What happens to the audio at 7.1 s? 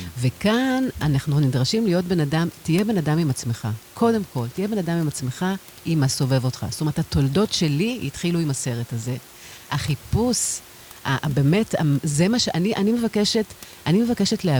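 At 7.1 s the speech carries on intact, with only the room noise, about 24 dB below the speech, in the background.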